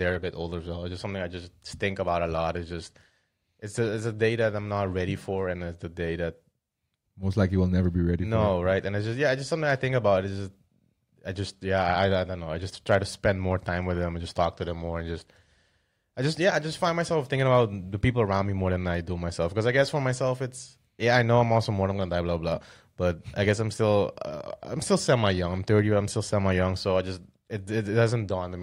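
Hard clipping appears four times in the speech: at 12.92–12.96 s between "don't know I just" and "to spend more time", at 21.14–21.38 s after "for myself it's", at 23.48–23.51 s after "blah blah but I", and at 25.10–25.26 s. Peaks exceeded the stage's ceiling by about 2 dB, then about 1 dB, and were sliced flat, producing brief crackle on loud syllables. Unlike soft saturation's rounded warmth, these flat tops add bright, abrupt high harmonics.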